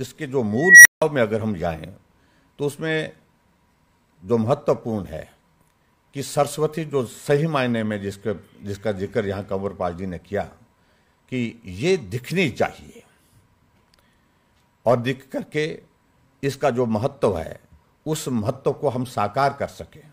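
Right near the start, at 0.58 s, a tone of around 2 kHz swells out of the audio over about 276 ms, screams up into clipping, and then the whole thing drops dead for about 166 ms before sound returns, with the event over by 1.02 s. That's an unstable filter: a recursive stage with bad coefficients feeding back on itself until it overflows, going silent until it resets.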